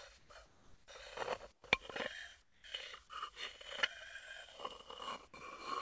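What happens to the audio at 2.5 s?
From 2.42 to 2.64 s, about 220 ms, the real background drops out and is replaced by a steady, featureless hiss roughly 8 dB quieter. This is comfort noise in place of the background, likely from discontinuous transmission: the sender stopped sending during a quiet stretch about 24 dB below the loud parts, and the receiver filled the gap with synthetic shaped noise. On a spectrogram the textured background gives way to a smooth, uniform wash, still capped at 8 kHz by the call codec. The waveform shows a flat, even band at a lower level.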